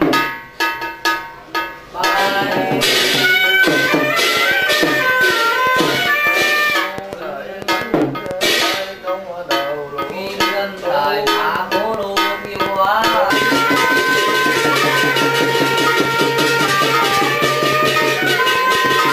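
From 3.85 s to 18.93 s a train of clicks runs over the sound: roughly seventy short, similarly shaped pulses arriving at about 4.8 per second, with uneven spacing between them. Each click peaks around 10 dB above the underlying signal, so it reads as a sharp ticking or popping that stays plainly audible in quieter passages too. The repeated similar pulse shape points to an external injection, likely electrical interference or a faulty connection or power supply.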